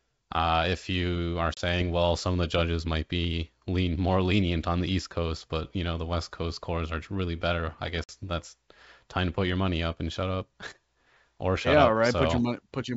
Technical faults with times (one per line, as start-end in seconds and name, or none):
1.54-1.58 packet loss on an ADPCM call
8.04-8.11 packet loss on an ADPCM call